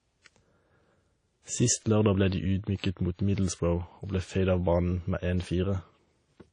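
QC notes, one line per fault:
Throughout: WMA compression, likely at a low bitrate, something like 32 kbps from an early encoder. The speech rings and smears, with hiss swelling and fading alongside it. Long transform blocks spread quantisation noise, and nothing survives above 10 kHz.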